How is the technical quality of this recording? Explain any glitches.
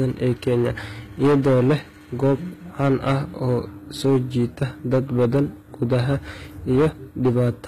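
The recording has two faults, both present throughout the speech.

Hard clipping runs across the whole clip. The signal was driven about 11 dB past what one stage could pass, so roughly one sample in twenty has its peak sliced flat. Those flat tops add harmonics high in the spectrum, heard as distortion on the louder syllables.

Coding damage is plainly audible throughout, and nothing remains above 14.9 kHz. The likely cause is HE-AAC compression at a low rate, consistent with about 20 kbps. That codec rebuilds the treble by copying lower bands upward, so the harmonics above the crossover do not match. S sounds come out gritty or metallic.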